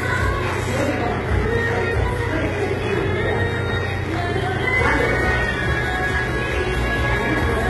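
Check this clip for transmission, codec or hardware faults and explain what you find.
One fault runs through the whole clip. It is heavy damage that is likely from HE-AAC compression. The treble has a rough, metallic, gritty edge, and nothing is present above 11.8 kHz. The encoder stored only the lower spectrum in detail. It rebuilt the upper bands by copying lower content upward and shaping it with a coarse envelope. That synthetic treble does not match the real harmonics, which is why it sounds harsh. The heavy damage fits a bitrate around 16 kbps.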